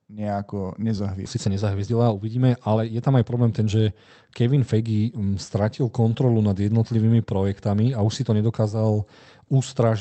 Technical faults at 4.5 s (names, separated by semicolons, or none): jitter buffer speed-up